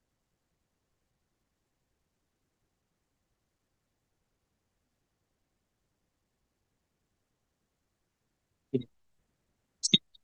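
No technical faults can be heard in this recording.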